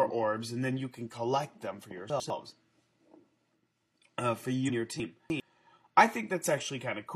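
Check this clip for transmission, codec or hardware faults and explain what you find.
Two kinds of fault are present: chunks out of order, twice, and one case of compressed frames skipped.

Chunks out of order, 2.1–2.3 s: a 100 ms chunk was delivered one chunk late and plays after its successor. No audio is lost, but the sequence is swapped, leaving hard joins that sound like a brief jumbled stutter.

Chunks out of order, 5.0–5.4 s: here a 100 ms chunk arrives three chunks late, so it plays after the three chunks that should follow it. The same three hard joins occur over a longer span, giving a scrambled passage.

Compressed frames skipped, 4.65–4.71 s: the decoder never plays about three frames of 46.4 ms each, so the audio jumps ahead by roughly 150 ms.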